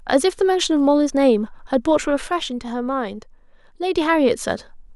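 Speech, with a sudden level drop of about 6 dB from 2.27 to 3.95 s, likely one channel dropping out before the mono sum.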